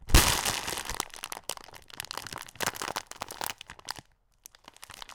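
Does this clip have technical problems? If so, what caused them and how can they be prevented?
Yes. From 2.61 to 3.70 s there is buffer tearing. The writing program and the playback hardware have drifted out of step, so they cross inside each period. A small slice of every buffer replays audio from a few milliseconds earlier, with hard joins on both sides, and this produces a rattling buzz at 345 Hz, which fits a 128-sample buffer. A spectrogram shows a 345 Hz line and its harmonics across that span, and the waveform shows regular discontinuities. Keeping writes safely ahead of the read pointer, or using a larger buffer, prevents it.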